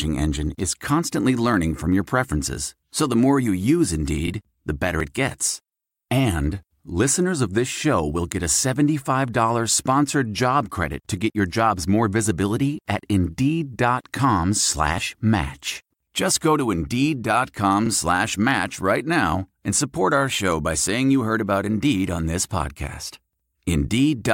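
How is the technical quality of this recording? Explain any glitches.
The speech has two audible skips, a fault best described as audio missing between chunks. The first is at 5.00 s, just before "it gets", and the second at 14.98 s. At each, a sliver of about 20 ms drops out and the surrounding audio is butted together with no gap, so the speech jumps forward slightly. The 10 s spacing likely points to a recorder handing over between fixed-length chunks and losing samples at each boundary.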